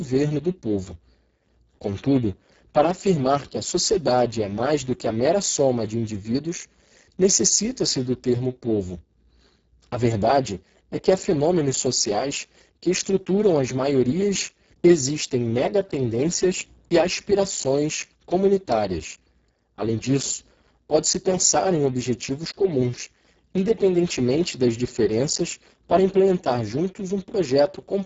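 From start to finish the speech runs through a heavily squeezed Speex codec, which fits a very low bitrate of around 6 kbps. The excitation is starved, so the speech comes out hoarse, noisy and close to robotic, and nothing gets through above about 7.7 kHz.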